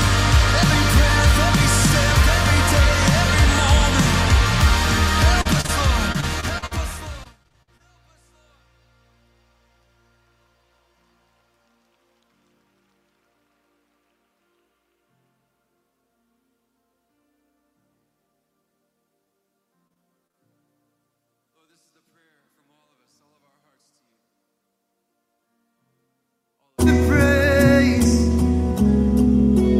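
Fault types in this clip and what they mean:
Short concealed packet loss: Isolated dropouts at 5.41, 5.61 and 5.66 s, each a few hundredths of a second, are bridged by extending the preceding sound before blending back. Each heard as a brief smear or wobble, unlike the sustained choppiness below.
Repeated packet loss (robotic sound): Clustered holes at 6.12–6.74, 7.24–7.82 and 19.88–20.36 s, with five, six and four patches and gaps up to 50 ms, conceal roughly a fifth to a quarter of each stretch. Back-to-back fills give choppy sound with pieces missing rather than one isolated blip.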